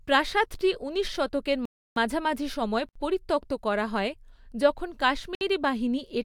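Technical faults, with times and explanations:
1.65–1.96 s, 2.89–2.96 s and 5.35–5.41 s, block of digital silence: the output samples were replaced by zeros for 310 ms, 66 ms and 61 ms. Each cut happens with no fade, so the speech cuts off and comes back abruptly. The first cut leaves a clear hole, and the shorter two sound like brief dropouts.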